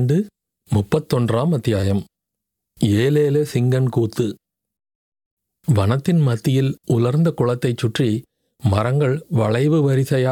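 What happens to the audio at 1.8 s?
A repeated buffer occurs from 1.81 to 1.83 s. New audio arrived late, so the playback device replayed the same short block of speech two extra times, which fits a 10 ms buffer. The hard joins between repeats give a brief buzzy click, with essentially nothing lost.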